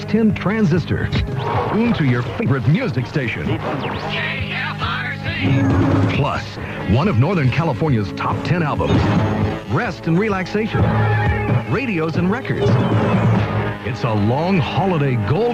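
A skip ahead at 1.73 to 1.75 s drops roughly 0.7 s of audio already queued behind it, so playback jumps forward with no gap filling the join. Jitter buffer speed-up then trims the overfull buffer by cutting short pitch-period pieces: 1.83 to 3.21 s runs at 113% speed, losing about 0.2 s, and 6.21 to 7.97 s at 105%, losing about 0.1 s, so the sound hurries at unchanged pitch.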